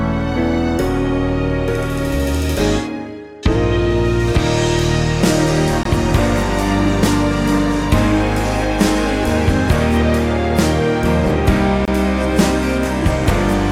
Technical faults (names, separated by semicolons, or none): gap between stream segments